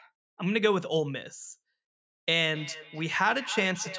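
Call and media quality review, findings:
Speech returning as thin, ringing repeats roughly every 0.3 s, 2.54 s to end, loudest about 14 dB below the voice. Feedback echo between two devices: a second device replays this microphone's audio, which is recaptured past the echo canceller.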